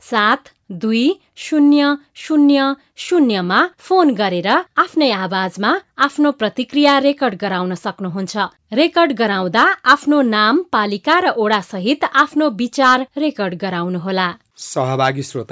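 No technical faults are audible.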